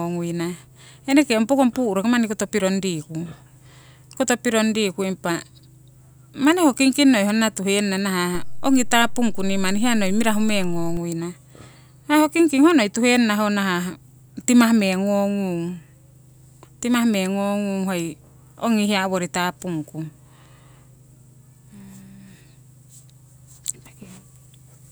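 At 8.35 s a DC step shifts the waveform's zero line by about -23 dBFS, giving a low thump while the speech carries on unchanged. By 10.97 s the offset is gone. Unlike a dropout, the speech never breaks.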